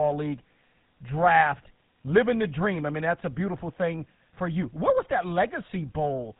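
From start to finish, the speech shows GSM full-rate codec damage. Nothing above 4 kHz survives. Coarse pulse excitation leaves a plainly audible buzzy, gravelly roughness, consistent with 13 kbps coding.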